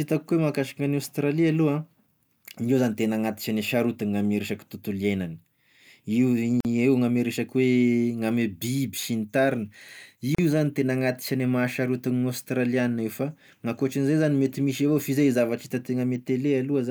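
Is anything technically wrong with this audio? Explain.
Yes. There's a gap at a join of encoded pieces, twice: a dropout of about 45 ms from 6.60 to 6.65 s, and another of about 36 ms from 10.35 to 10.38 s. It sounds like the speech was encoded in chunks and glued back together untrimmed, so the encoder's start-up silence and last-frame padding stayed in. You get a short hole with smeared edges, then the speech picks up right where it left off.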